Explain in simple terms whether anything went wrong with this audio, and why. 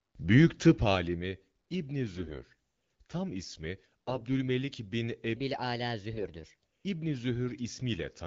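Three short patches have AMR bit errors, at 2.15 to 2.43 s, 4.08 to 4.21 s and 6.14 to 6.25 s. The speech turns hoarse, scratchy and gargly while keeping roughly its pitch and loudness. Over a weak link, some of the less protected bits in the compressed speech frames got flipped. The decoder then rebuilt the sound with wrong details.

From 5.36 to 6.67 s there's a section at the wrong speed. It plays 1.21 times too fast, so the voice sounds hurried and about three semitones higher. It was likely played against the wrong clock. The third bit-error patch falls inside this stretch.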